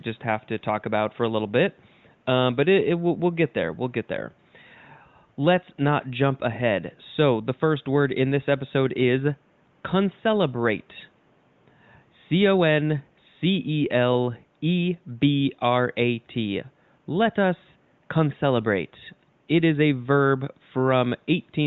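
No technical faults are audible.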